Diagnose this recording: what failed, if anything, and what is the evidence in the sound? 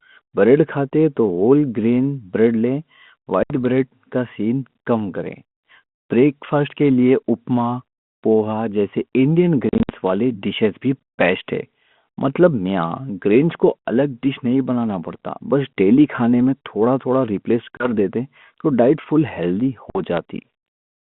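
Packet loss on an ADPCM call, a network fault, at 3.43, 9.69 to 9.90 (gaps scattered over about 200 ms), 17.77 and 19.9 s. Each is a hard-edged silent hole, then slightly distorted speech while the G.726 decoder's predictor and step size re-align with the sender's.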